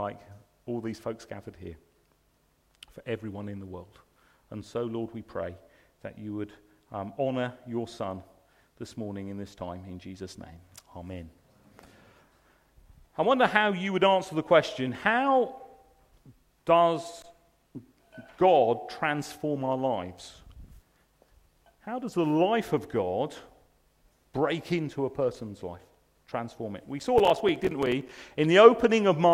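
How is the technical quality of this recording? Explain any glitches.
There's one real glitch, near the end: processor overload crackle from about 26.99 to 28.18 s. The processor couldn't finish its tiny buffers, a few milliseconds each, on time, so about twenty dropped out as hard-edged silent gaps, heard as gritty crackle riding on the sound.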